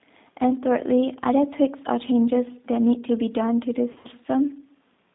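Throughout, the speech sounds narrow, slightly rough and synthetic, confined to a line band of about 150 Hz to 3.7 kHz. This is plainly audible G.729 codec damage: an 8 kbit/s encoder rebuilding each 10 ms frame from a vocal tract filter, pitch predictor and a few pulses.

From 3.92 to 4.08 s the speech is stretched into a buzzy tone or coloured noise, fading weaker before recovering sluggishly. This is VoIP packet loss concealed by the speech codec: about 90 ms went missing across 120 ms, the longest gap about 40 ms, and the decoder extrapolated from its previous frames.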